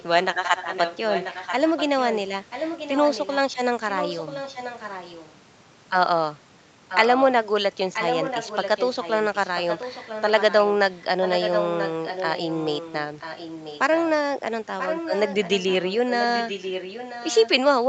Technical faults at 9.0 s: echo leak

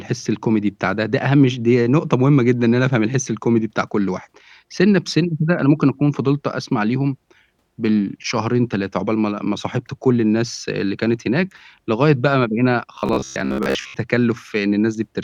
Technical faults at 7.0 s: none

